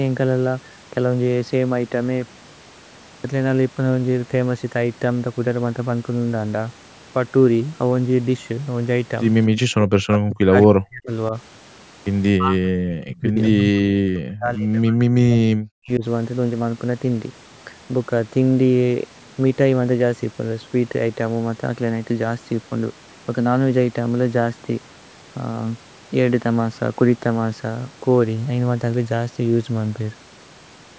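Echo leak at 9.56 to 9.6 s: a brief copy of the speech returns about 229 ms late, roughly 15 dB below the direct sound. This is likely an echo canceller on a loudspeaker end that failed to fully remove what its microphone picked up from the far side. The remnant was sent back down the line, so the listener hears a faint, delayed scrap of the speech.

Speech suppressed in double talk comes next, in three places. At 9.71 to 11.1 s the speech drops away in pieces for about a second in total, sinking as far as around 40 dB. At 11.3 to 11.34 s there is a slight dip of about 5 dB. From 12.32 to 16.04 s roughly three seconds are affected, again down to about 40 dB. Both ends were likely talking at once, and the echo canceller, unable to tell the local talker from loudspeaker echo, turned everything down. The result is gaps and fading that come and go across the two longer stretches.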